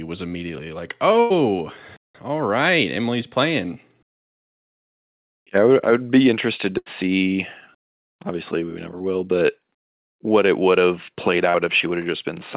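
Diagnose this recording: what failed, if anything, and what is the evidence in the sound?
Burst of packet loss, network stage, at 1.20 to 1.32 s just after "was immediately like" and at 6.78 to 6.88 s just after "I would be interested". In each case a run of packets failed to arrive in time, about 100 ms and 80 ms of speech respectively. The receiver stretched the last sound into a fading held buzz or hiss, then picked up later in the utterance, so that stretch of speech is gone.

Short concealed packet loss, also in network delivery, at 8.98 to 9.02 s and at 11.50 to 11.56 s just after "it would have played". Here only about 20 ms and 40 ms went missing. The decoder patched each hole by extending the preceding sound and crossfading back into real audio, which leaves a brief smear or wobble. The call's narrowband path, with nothing above 4 kHz, is consistent with a 64 kbps G.711 mu-law link.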